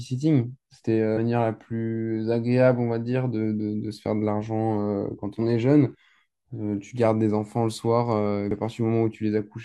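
Speech, interrupted twice by compressed frames skipped, at 1.13 s and again at 8.47 s. Each time the decoder jumps over whole frames that are absent or rejected as damaged, so roughly 300 ms of audio vanishes at the first point and about 150 ms at the second. The seam at each point lasts about 40 ms. That sound is genuinely lost rather than silenced sets it apart from a dropout.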